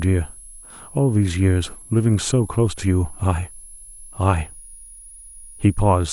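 Speech with a switching supply whistle running the whole way through. A thin, high tone wanders between about 10.4 and 10.9 kHz, roughly 25 dB below the speech. A switching power supply is running in an audible burst mode or beating with another one, drifting as its load shifts.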